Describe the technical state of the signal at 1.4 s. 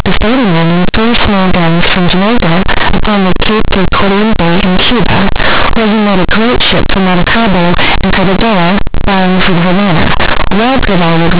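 At 1.4 s the speech is harsh, very loud and buzzy, with heavy noise even in quiet moments: companded audio read as linear, present throughout, where mu-law bytes play as raw 8-bit samples without expansion.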